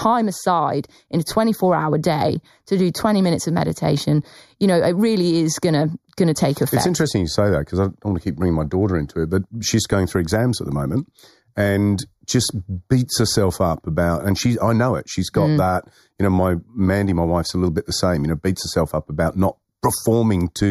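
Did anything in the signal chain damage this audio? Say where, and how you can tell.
Yes. Throughout the speech there is channel delay (comb filtering): a hollow, phasey colour with a fixed notch around 3 kHz. One channel lags the other by roughly 0.2 ms, a few samples at the driver or buffer stage, and the mono sum cancels evenly spaced frequencies.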